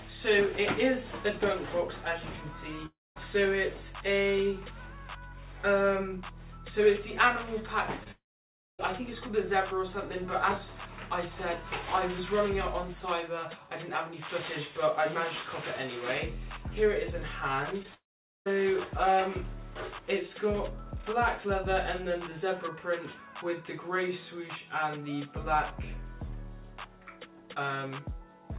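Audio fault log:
2.86–3.18 s, 8.12–8.81 s, 17.94–18.48 s: long network dropout. The last sound carries on as a fading buzz, then goes silent. Audio resumes with the missing stretch gone, likely from lost network packets.
8.04–8.08 s, 17.83–17.86 s: short concealed packet loss. About 20 ms never arrived. The receiver extended the preceding sound to fill it, giving a brief smear.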